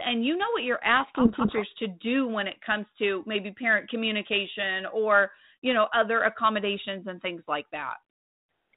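Speech carried over a G.726 path at 32 kbit/s, with a codec payload misread from 1.0 to 1.63 s: the voice is buried in harsh distortion that points to the receiver reading the bits of each ADPCM code word in the wrong order. Unlike the rasping hiss of low-rate G.726, which follows the speech level steadily throughout, this breaks in and clears abruptly once both ends agree on packing again.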